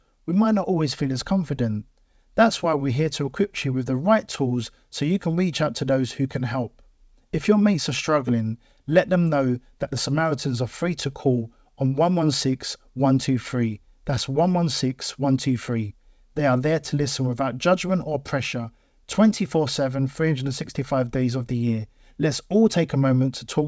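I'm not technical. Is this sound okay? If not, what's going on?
Yes, nothing has gone wrong in this speech recording. It went through a normal internet call connection, which leaves out the highest sounds above 8 kHz, so it has the slightly muted, phone-call quality that is ordinary for a call.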